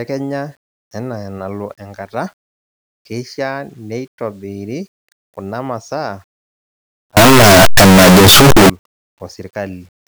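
Signed and unsigned mixed up, from 7.17 to 8.70 s: the speech abruptly becomes a loud, harsh roar with quiet moments as loud as the rest, likely because the 8-bit samples were read with the wrong sign convention. Every zero crossing then jumps across the full range.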